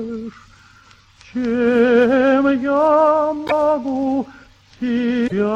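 At 3.46 s and again at 5.27 s the audio skips forward and the next 50-odd milliseconds, about two 26.1 ms frames' worth, come out garbled as a brief chirp, burst of noise or short hole. That's most likely a broken MP3 bit reservoir. Frames went missing, so the frames right after each gap reached back for borrowed data and decoded bytes from the wrong frame until the stream caught up again.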